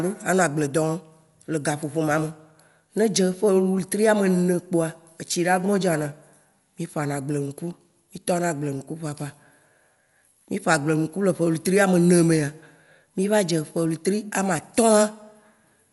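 Throughout, the speech sounds dull with nothing above 11.4 kHz and rough, fluttering noise around tones, likely Dolby Digital compression at about 64 kbps, distinct from MP3 swirl.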